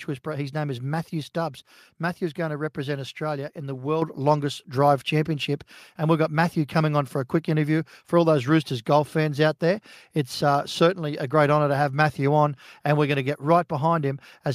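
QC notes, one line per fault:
4.02 s, microphone volume stepped up: after "in the", input gain jumps about 7 dB in one step, and the background rises with the speech, unlike a talker getting louder.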